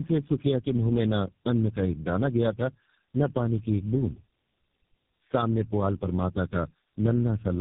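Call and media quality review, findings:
Tandem speech coding, whole clip. Rough, muffled, warbly speech. No content above 3.7 kHz. Probable component: inter-network transcoding. The sound fits three low-rate speech codecs in a row, likely G.723.1, then AMR-NB, then GSM full rate, with G.711 links between them. Each coder re-encodes the previous coder's degraded output, so the artefacts compound.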